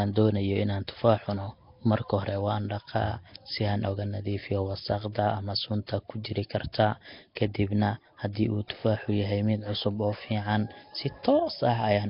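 Throughout the speech there's a rough, hissy, underwater smear, likely Nellymoser compression starving weak bands and filling them with noise. At 6.24 s and 7.35 s there's pre-echo: block-spread quantisation noise leaks a brief hiss just before sharp attacks, softening them.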